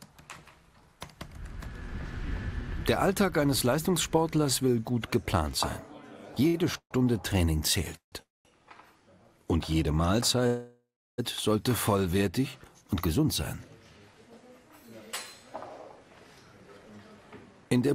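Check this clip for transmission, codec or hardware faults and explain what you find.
The clip shows transmission faults from late packet delivery: one short stall, four call audio freezes, and a jitter buffer speed-up at the end.

At 6.47 to 6.56 s, a late packet left the jitter buffer briefly empty, causing a short stall. The receiver stretched the last sound for 65 ms until the packet arrived, so the sound is held too long with a slight buzz or dip, and nothing is lost.

Call audio freezes occur at 6.78 to 6.93 s, 7.97 to 8.14 s, 8.22 to 8.47 s and 10.47 to 11.2 s, likely from packets held up in transit that drained the jitter buffer. Each time, the last sound decays into silence before playback resumes where it stopped. The gaps last 128 ms, 152 ms, 229 ms and 714 ms, with 90 to 350 ms of actual silence.

From 17.65 s to the end, the buffer held more audio than its target, so the receiver trimmed short pitch-period pieces, roughly 50 ms in total. 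This jitter buffer speed-up makes the sound run at 112% speed at unchanged pitch, so it sounds hurried.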